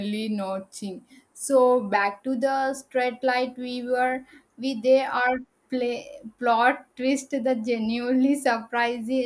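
From the start to 1.94 s the speech sounds slightly low and sluggish. It drags at about 0.92 times normal speed, with every pitch dropped by roughly one and a half semitones. This is a wrong sample rate fault. Audio captured at 24 kHz is played back at 22 kHz with no conversion, so speed and pitch both fall by the same ratio of the two rates, giving a heavier, slowed delivery until 1.94 s.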